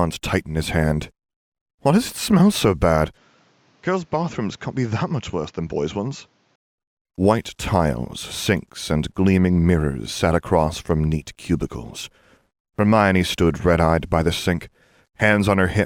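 From 3.17 to 6.56 s the input was likely switched to a poorer device, with no gap at the switch. The speech loses everything above 7.6 kHz, drops about 5 dB, and carries a new noise floor roughly 35 dB down, sounding duller until it clears.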